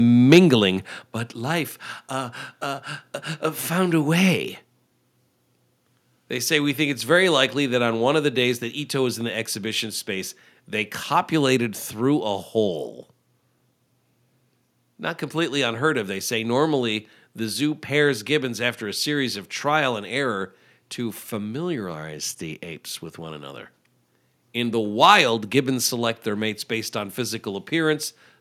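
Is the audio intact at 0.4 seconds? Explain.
No. A microphone overload runs from 0.32 to 0.39 s and ends right at that moment. The loudest peaks there go about 5 dB past what the converter can hold. Their tops are sliced flat, and a noticeable share of the samples in that span are affected. The squared-off waveform adds a harsh, crackling edge to the sound. The likely cause is an input level set too high on the microphone.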